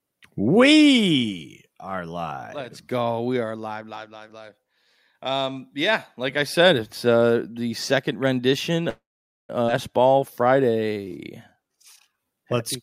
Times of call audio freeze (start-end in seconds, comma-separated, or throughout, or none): 8.89-9.52